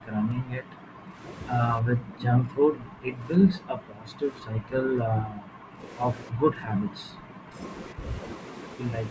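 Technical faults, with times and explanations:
0–1.17 s, 1.81–3.21 s, 3.39–5.82 s, 6.3–7.58 s and 7.94–8.02 s: speech suppressed in double talk. The speech repeatedly sinks or breaks up in pieces, falling by about 40 dB at its deepest in the first four stretches. The brief dip at the end is shallower, about 10 dB. The likely cause is an echo canceller that, with both ends talking at once, could not tell this talker apart from the loudspeaker echo and turned everything down together.
2.17–2.25 s: echo leak. A faint delayed copy of the sound, about 20 dB below the speech, slips through for a short scrap. It trails the original by about 303 ms. This is likely loudspeaker audio that the far end's microphone picked up and its echo canceller failed to remove fully, so it was sent back down the line.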